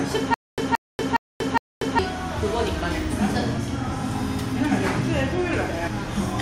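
From 0.34 to 1.99 s there is a stutter with silent gaps, likely from a stalled stream replaying its last fragment at each retry. A 173 ms burst repeats four times, every 412 ms, with 238 ms of dead silence between, and the intervening audio is lost.

Compressed frames are skipped at 3.57 s and again from 5.86 to 5.88 s. The decoder drops whole frames, about seven frames of 23.2 ms each and then about ten, so the sound jumps ahead by roughly 150 ms and 200 ms.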